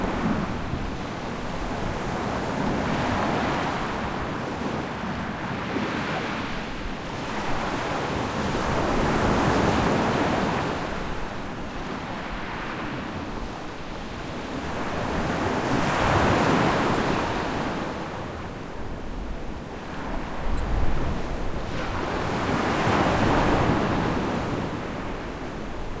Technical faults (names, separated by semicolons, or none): none